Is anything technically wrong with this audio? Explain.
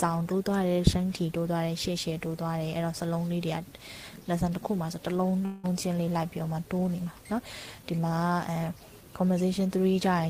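Yes. From 5.45 to 5.65 s there is a long network dropout, likely from a run of packets that never arrived. The receiver covered about 180 ms by stretching the last sound into a fading buzz or hiss, and the audio then resumes without the lost part. On a spectrogram this appears as smeared, repeated bands that fade. The waveform shows a decaying tail rather than a flat gap.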